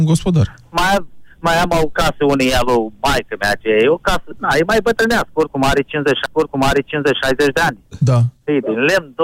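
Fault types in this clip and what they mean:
Stream segment repeated: the player queued the same segment twice, so from 6.26 to 7.25 s about 0.99 s of sound plays again after a small blip.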